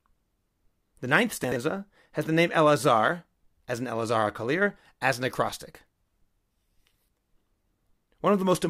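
At 1.44 to 1.56 s, just before "has the name", the speech has chunks out of order: one 40 ms block arrives two blocks late and plays after the two that should follow it. Nothing is missing, but that 120 ms stretch sounds jumbled, with three hard joins. On a waveform, the joins show as abrupt steps. A spectrogram shows three thin vertical broadband lines with formant tracks jumping out of sequence between them.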